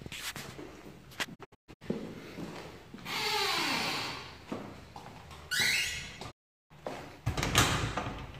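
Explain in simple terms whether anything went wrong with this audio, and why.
Two digital broadcast dropouts cut into the audio. The receiver stopped getting usable frames and muted until good ones returned. From 1.34 to 1.83 s the sound fades out quickly, in about 20 ms, several times. It leaves short holes totalling about 0.29 s, the longest 0.13 s. At 6.30 s it fades to silence again and stays silent until 6.72 s. Whatever was broadcast during those silences is simply gone.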